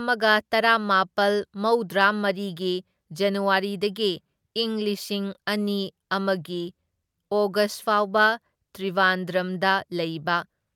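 The speech recording has no audible technical faults anywhere in the clip.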